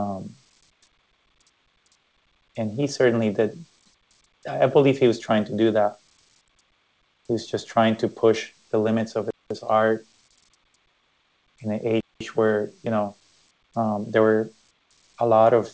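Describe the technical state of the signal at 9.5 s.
At 9.5 s the signal is at the trailing edge of a gap between chunks, running from 9.31 to 9.51 s. The audio seems to arrive in blocks of 2.5 s. Here 200 ms of silence is left before one block. No material is lost, but the flow breaks. It sounds like a short hole in the sound. The call-path band limit, with nothing above 8 kHz, stays constant across it.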